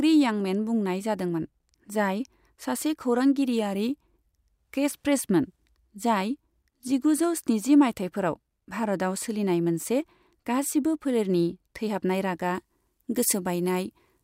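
From 12.55 s to the end at 14.23 s, the speech has pre-emphasis left on: the recording's treble boost was never undone, leaving 10 kHz about 8 dB above 1 kHz. The sound turns thin, bright and hissy on sibilants. Unlike a high-pass cut, the low end stays intact. The rise instead follows a fixed shelf, which fits the CD 50/15 µs curve.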